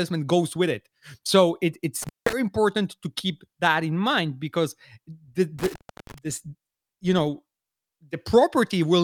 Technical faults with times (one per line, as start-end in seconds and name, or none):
2.02-2.33 intermittent contact
5.59-6.18 intermittent contact